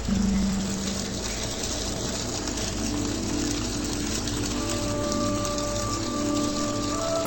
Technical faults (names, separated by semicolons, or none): interleaved audio read as planar